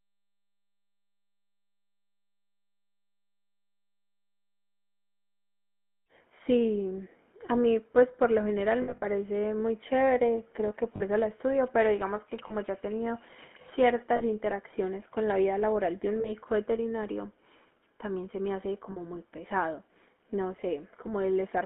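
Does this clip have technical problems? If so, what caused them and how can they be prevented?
Yes. The GSM full-rate codec runs through the whole clip, giving the speech a plainly buzzy, gravelly roughness with nothing below 200 Hz or above 3.4 kHz, which fits the 13 kbps full-rate coder. It rebuilds the voice from a vocal-tract model driven by a regular pulse excitation kept at only every third sample, so natural detail is replaced by a coarse, rasping texture. Routing the call over a wideband codec such as AMR-WB would prevent this.

Lost GSM frames appear at 8.82–9.07 s, 10.96–11.02 s, 12.48–12.55 s, 14.16–14.23 s, 16.20–16.31 s and 18.92–18.98 s. The first is the worst, with about 140 ms missing, scattered across roughly 200 ms, and the longest unbroken gap is around 70 ms. The others each lose 20 to 40 ms. During each gap the decoder reuses the last good frame's settings, so the sound briefly freezes into a rough, metallic ring instead of continuing. 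Stronger radio coverage and better channel error protection would prevent these losses.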